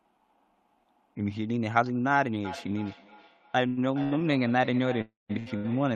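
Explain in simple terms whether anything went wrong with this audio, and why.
Feedback echo between two devices starts at 2.45 s and runs to the end. The speech comes back again roughly every third of a second, fainter and thinner, more ringing each time. Two devices in the same room were on the call. One played out what the other's microphone sent, and that microphone picked it up again. Each device's echo canceller only removes its own playback, so this loop slipped through.

Short stalls from a late packet occur at 3.67 s (96 ms), 4.03 s (85 ms), 5.39 s (70 ms) and 5.56 s (78 ms). At each point a sound is held slightly too long, with a faint buzz or dip. A chunk of audio arrived late, so the receiver stretched the last sound until it turned up and then carried on from the same place. Nothing is lost, but the speech is briefly drawn out.

A call audio freeze runs from 5.01 to 5.31 s. 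The last sound continues as a fading buzz or hiss for 278 ms, going fully silent for 180 ms of that, before the speech picks up exactly where it stopped. This is likely caused by audio being held up on its way across the network, leaving the receiver with nothing to play. A pause has been inserted, but nothing is missing.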